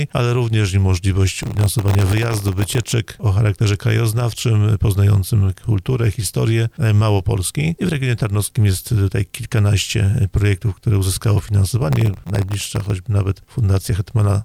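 Processor overload crackle tears through the sound from 1.39 to 2.92 s and again from 11.93 to 12.90 s. About 100 and then about 50 tiny silent gaps, each under a millisecond, fit a processor repeatedly missing buffer deadlines. Unlike a single dropout, the grit is dense and then stops.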